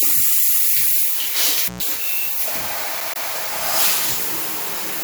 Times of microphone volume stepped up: none

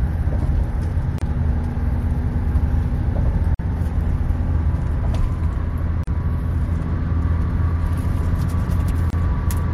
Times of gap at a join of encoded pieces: 1.18-1.22, 3.55-3.59, 6.04-6.07, 9.10-9.13

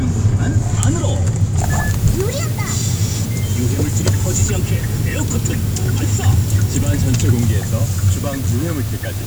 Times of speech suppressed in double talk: none

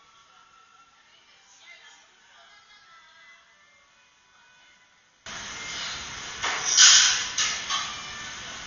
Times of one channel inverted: 0.00-5.26

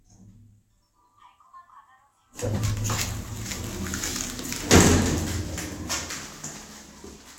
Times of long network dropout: none

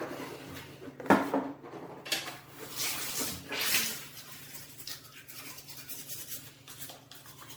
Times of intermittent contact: none

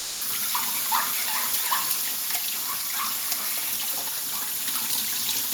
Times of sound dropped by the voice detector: 0.00-0.19

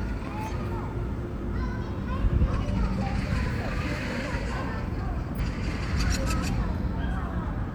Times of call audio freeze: none

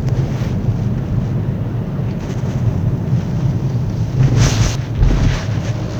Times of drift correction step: none

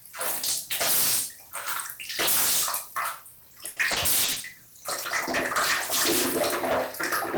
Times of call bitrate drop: 4.42-6.34

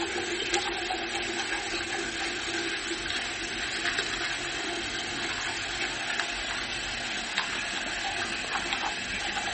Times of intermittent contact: none

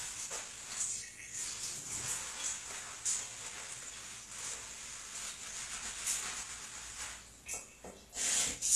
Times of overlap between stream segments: none

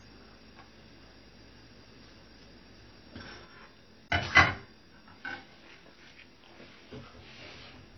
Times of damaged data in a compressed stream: none

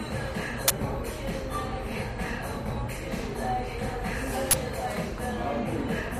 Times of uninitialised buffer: 0.68-0.70, 4.51-4.53

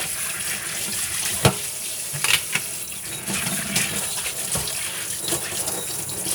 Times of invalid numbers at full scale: none

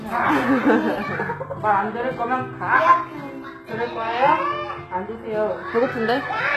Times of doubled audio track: none

